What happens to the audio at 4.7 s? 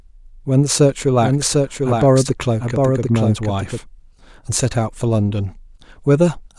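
Nothing goes wrong at 4.7 s; the speech continues intact through that moment.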